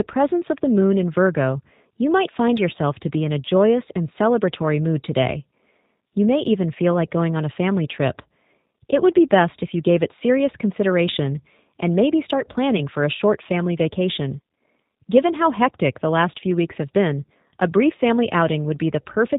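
Throughout, the speech has been coded with a G.729 codec, sounding like the 8 kbit/s G.729A variant, which rebuilds each 10 ms frame from a vocal tract filter, a pitch predictor and sparse pulses. Everything above 4 kHz is gone, leaving the speech dull, plainly rough and synthetic.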